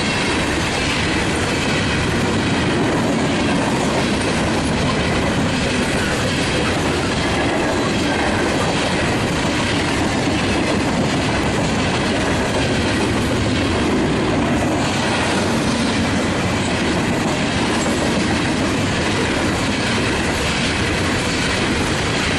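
No technical fault can be heard anywhere in this audio. Nothing in it calls for a time, a value or a cause.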